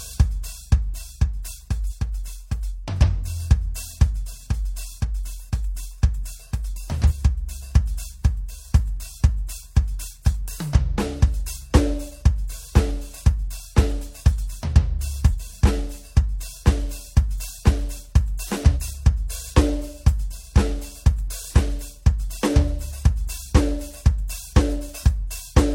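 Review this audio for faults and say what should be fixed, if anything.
At 1.86 to 1.92 s and again at 7.06 to 7.12 s, the music lurches forward, dropping roughly 200 ms and then about 300 ms of material. These are compressed frames skipped: whole frames never reached the output because they were missing or rejected as damaged by the decoder. The jumps fit a 46.4 ms frame length, around four frames at the first and perhaps seven at the second. Re-encode or re-transfer from an intact source, and verify file integrity before distribution.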